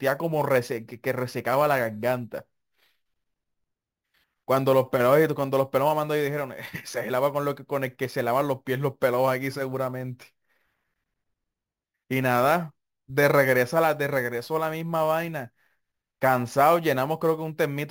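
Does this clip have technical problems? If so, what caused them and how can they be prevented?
Yes. Throughout the speech there is imaging from sample-and-hold upsampling. A bright, metallic fizz rides on top of the voice and rises and falls with it. It sits mostly between 8 and 16 kHz, about 21 dB below the speech. The rate was raised by holding each sample with no smoothing filter. That mirrors the spectrum above the old band, which points to a 16 kHz original. The lowest copy moves against the pitch. To prevent it, upsample with a proper anti-imaging low-pass interpolation filter.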